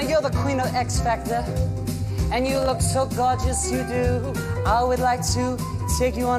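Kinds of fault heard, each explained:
Processor overload crackle: the processor fell behind and missed a run of buffer deadlines. Each miss left a tiny, hard-edged gap of silence. From 2.47 to 2.69 s, about ten such dropouts, each under a millisecond, merge into a short, gritty crackle.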